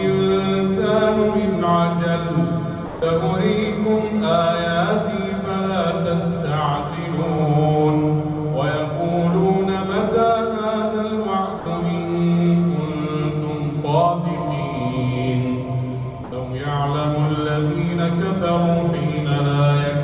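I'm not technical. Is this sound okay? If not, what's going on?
No. Around 2.86 to 3.02 s, 11.6 to 11.66 s and 16.24 to 16.32 s, the sound briefly vanishes, replaced by steady noise or near silence. That's likely sound dropped by the voice detector: the sender mistook those bits for background, stopped sending, and the receiver filled in comfort noise.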